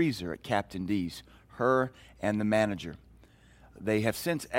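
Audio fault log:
Nothing to flag in this one, since the speech comes through without any technical trouble that I can hear.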